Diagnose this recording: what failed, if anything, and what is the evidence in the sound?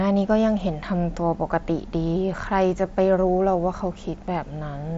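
Nothing failed; no stage of the chain shows faults.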